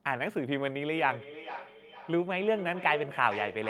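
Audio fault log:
0.93–3.69 s, feedback echo between two devices: a second device in the room plays back this microphone's signal, and the microphone captures it again. The local echo canceller cannot remove it, so the speech returns about every half second, thinner and ringing, peaking about 11 dB below the direct speech.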